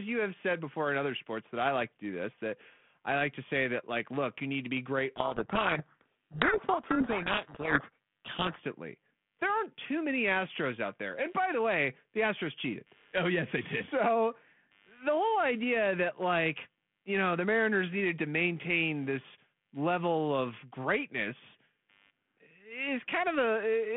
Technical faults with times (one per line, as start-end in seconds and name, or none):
0.00-23.97 computer activity noise
5.16-8.57 codec payload misread